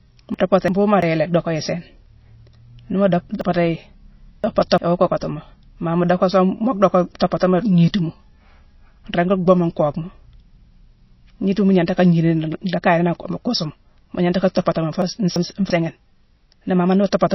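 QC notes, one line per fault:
throughout: MP3 compression. The speech has a plainly audible watery, swirly quality, and nothing is present above about 5.8 kHz, so the treble is sharply cut and sibilants lose their edge. This fits a low bitrate of around 24 kbps. At that rate the encoder is likely starved of bits. It drops the top band at a fixed frequency and zeroes weak spectral lines, which flicker on and off between frames, and onsets smear.
0.34–1.02 s, 3.41–4.78 s and 15.02–15.70 s: chunks out of order. In each range, blocks of about 341 ms play in the wrong sequence. A block that belongs earlier arrives late, by one block at 0.34 s and 15.02 s and by three blocks at 3.41 s. Each time the speech sounds jumbled for a moment. The first range ends just before "yi lé docka yi", and the second ends just before "iwoo kockati mo ma".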